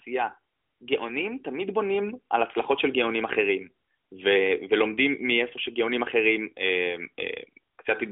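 No technical faults can be heard in this speech.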